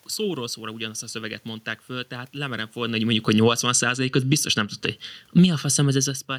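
Speech with room noise throughout. Right after "mondták föl tehát lemerem", automatic gain falling pulls the level down by about 14 dB from 2.76 to 4.55 s, dropping the speech and the room noise together. A second, smaller fall of about 3 dB runs from 5.22 to 6.34 s. Overlapping these, automatic gain rising lifts speech and background together by about 6 dB from 3.91 to 6.05 s as the control corrects back upward. The level shifts near 2.5 s and 6 s come from the talker moving relative to the microphone.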